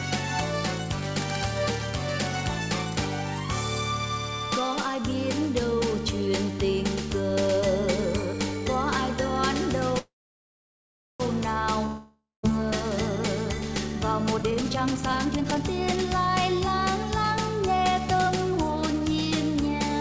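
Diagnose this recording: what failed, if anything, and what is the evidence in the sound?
Network stage, a call audio freeze from 9.99 to 11.22 s. The last sound smears into a fading buzz, then about 1.09 s of near silence, and it picks up right where it left off. Likely packets stalled and the jitter buffer ran dry, inserting a 1.21 s gap.

Then a long network dropout from 11.86 to 12.53 s. The same fading tail, about 0.16 s of quiet, and the audio resumes roughly 0.58 s further on. That chunk was simply never delivered, likely a burst of lost packets rather than a stall.

Jitter buffer speed-up at the call-processing stage, twice: 14.34 to 16.28 s runs at 152% speed, shedding around a second, and 17.68 to 19.01 s at 108%, dropping roughly 150 ms. Pitch holds while it sounds rushed. That's the buffer trimming pitch periods to shed its backlog. Everything sits under 8 kHz through the codec path, consistent with a wideband call codec.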